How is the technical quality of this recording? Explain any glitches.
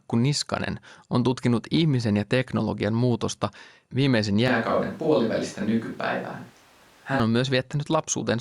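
One glitch stands out. Switch to a distant microphone, 4.48 to 7.20 s, just after "ja teknologian muutosta viimeisen": the speech abruptly turns roomy, hollow and bass-light at much the same level, with background noise roughly 30 dB down. The likely cause is the close microphone dropping out so a farther one carries the sound, until it snaps back.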